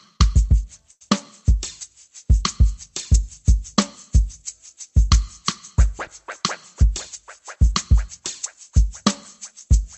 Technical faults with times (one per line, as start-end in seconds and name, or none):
0.91-1.02 short stall from a late packet